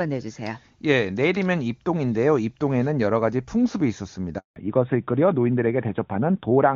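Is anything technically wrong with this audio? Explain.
Yes, there are two faults, both tied to the call changing networks near the end of the speech.

Handover gap, 4.38 to 4.56 s: while the call moved from one network to another, no speech frames arrived for 180 ms. The voice dies away almost at once, and that stretch is silent and its speech lost until the new link takes over.

Fallback to narrowband, from 4.56 s to the end: after the handover the call drops from HD Voice to the older narrowband AMR codec. Nothing is heard above 4 kHz, so the remaining speech sounds duller, muffled and rougher than the clear wideband sound heard before the gap.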